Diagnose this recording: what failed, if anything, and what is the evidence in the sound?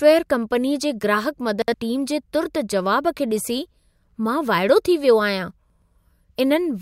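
Two brief jumbled moments break the flow of the speech: one at 1.62 to 1.74 s, just after "कंपनीअ जी ग्राहकु", and another at 5.70 to 5.82 s, right after "थी वियो आहियां". This is chunks out of order at the buffer stage. In each 0.12 s span, two 60 ms blocks play in swapped order, with one arriving a block late. No audio is lost, but there are three hard joins and the sequence scrambles.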